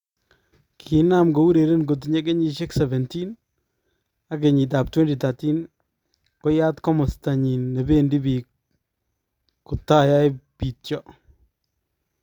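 No technical faults can be heard anywhere in the speech recording, and the signal stays steady and intact throughout.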